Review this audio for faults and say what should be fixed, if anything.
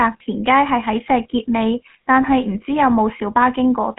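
GSM full-rate codec, throughout the speech: the voice is rebuilt from a vocal-tract model driven by a sparse, regularly spaced pulse excitation, giving a plainly audible buzzy, gravelly roughness. The band sits at 150 Hz to 3.4 kHz, nothing above 3.8 kHz, consistent with a 13 kbps GSM full-rate link. To prevent it, capture or route the call over a wideband codec such as AMR-WB or Opus instead of legacy GSM full rate.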